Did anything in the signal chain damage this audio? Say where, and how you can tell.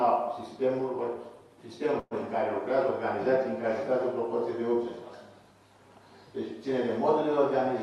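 Yes. At 1.99 s the sound stalls for about 0.15 s, to 2.14 s, which points to a call audio freeze in the network and jitter buffer stage. For about 116 ms the receiver stretches the last sound into a fading buzz or hiss, then about 30 ms of silence follows. The audio resumes where it stopped with nothing skipped, so the packets were likely delayed, not lost. That adds about 116 ms of latency. A dropout would remove audio, and a loss concealment would fill a gap without shifting timing.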